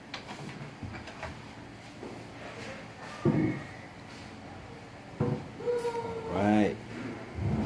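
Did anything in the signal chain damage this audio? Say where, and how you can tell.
No, none of the stages from capture through playback left any audible damage on this signal.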